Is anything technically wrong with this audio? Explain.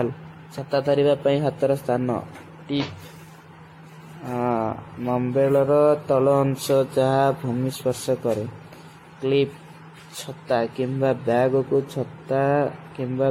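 Yes. Generation loss runs throughout the speech, from start to finish. The likely cause is repeated decoding and re-encoding, around seven times, with a lossy codec whose character fits AAC-LC at about 64 kbit/s. Each pass quantises again on a shifted frame grid, so noise and spectral holes pile up. The result is swirly, hollow and smeared, with blurred consonant attacks, and nothing remains above 16.5 kHz.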